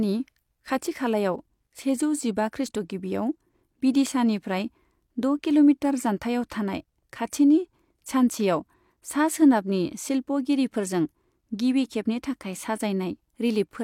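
No technical faults can be heard anywhere in this speech recording. Nothing in the sound breaks, drops out or shifts at any point.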